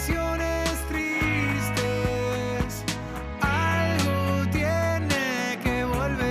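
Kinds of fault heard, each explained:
No technical fault can be heard anywhere in this audio. Nothing in the sound calls for an explanation of any kind of fault.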